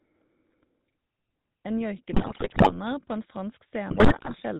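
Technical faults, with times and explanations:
Throughout, GSM full-rate codec: the speech has a buzzy, gravelly roughness from a vocal-tract model driven by sparse regular pulses, consistent with a 13 kbps full-rate stream. A spectrogram shows nothing above 4 kHz and smeared, pulse-striped harmonics.
2.12 to 2.72 s and 3.90 to 4.39 s, GSM bit errors: flipped bits corrupt filter, pitch and gain values, so the speech breaks into squawks, pops and gargling, with roughly 6% and 4% of bits damaged. The waveform shows abrupt level spikes, and the spectrogram shows frame-wide blotches and bent formants.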